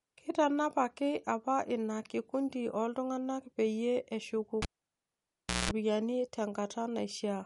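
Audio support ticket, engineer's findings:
Watery, swirly texture across the whole take, plainly audible; smeared consonant attacks; nothing above 11.2 kHz. Likely MP3 compression, consistent with a 48 kbps encode: starved encoder zeroing weak frequency lines frame to frame, fixed treble cutoff. Spectrogram: hard ceiling at 11.2 kHz, flickering holes and islands in the upper bands instead of continuous energy.

Cable pulled and plugged in, 4.62–5.71 s. Pop at pull-out, then about 1.04 s of near silence containing roughly 0.2 s of 60 Hz mains buzz while the tip makes partial contact, then a second pop as the signal returns. Connector or cable path. Waveform: two sharp spikes bracketing a flat gap. Spectrogram: broadband vertical lines at each pop, with a 60 Hz line and harmonics during the buzz.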